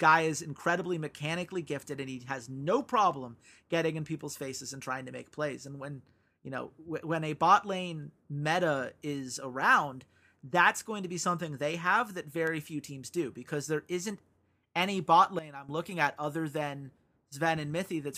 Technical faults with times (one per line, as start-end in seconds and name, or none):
15.39-15.69 sudden gain jump